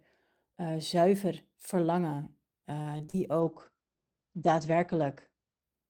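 From 2.81 to 3.15 s the speech turns choppy and robotic. This is repeated packet loss: several short holes, the longest 40 ms, were patched by extending the preceding sound, so about a third of that stretch is concealed.

Between 3.37 and 3.77 s the audio drags slightly at an unchanged pitch. This is a jitter buffer slow-down: repeated pitch periods add 39 ms and play back at 92% speed to rebuild the buffer's reserve.

From 3.40 to 5.71 s the speech sounds rough and muffled, with the top end cut at 8 kHz instead of 20 kHz. This call bitrate drop fits the encoder falling from about 32 to 13 kbps.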